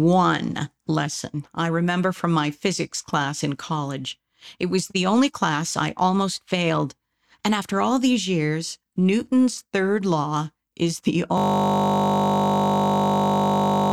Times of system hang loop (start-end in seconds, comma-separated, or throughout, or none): 11.38-13.92